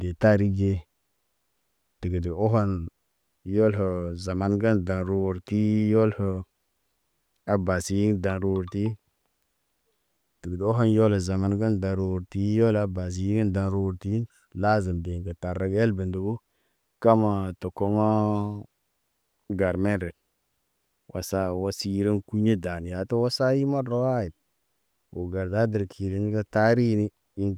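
No technical faults are audible.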